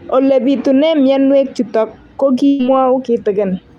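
At 2.47 to 2.61 s, a burst of packet loss drops 120 ms of speech; the receiver holds and fades the last sound, then skips ahead.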